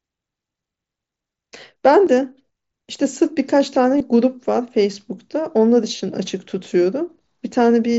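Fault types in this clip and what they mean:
Concealed Bluetooth headset packet loss: The speech briefly turns into a short held buzz at full level, with a faint warble as the real sound resumes. This happens at 3.98 to 4.00 s and 5.97 to 6.00 s, each about 22.5 ms, which fits a run of three lost frames. A single 7.5 ms gap at 2.06 s is almost inaudible. Packets from the headset went missing, and the phone filled each gap by repeating the best-matching recent stretch of waveform.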